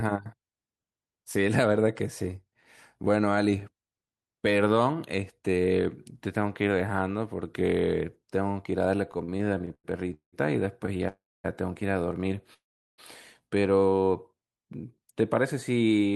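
From 9.11 to 10.35 s the speech drags and stutters through about a dozen brief holds, the longest 187 ms. These repeated stalls (stutter) happen because packets kept arriving late, emptying the jitter buffer, so the receiver stretched the last sound each time.

A single sound is held slightly too long at 10.98 to 11.02 s. This short stall from a late packet came from the buffer running dry for 22 ms until that packet arrived.

At 11.08 to 11.46 s and again at 12.54 to 13.00 s, the sound freezes into a fading buzz and then falls silent, for about a quarter and about four tenths of a second respectively, before resuming where it stopped. Each call audio freeze most likely comes from packets being held up in transit.

From 14.02 to 15.22 s the speech runs at 91% speed without any pitch change, adding 120 ms. This jitter buffer slow-down comes from the receiver repeating pitch periods to rebuild its reserve.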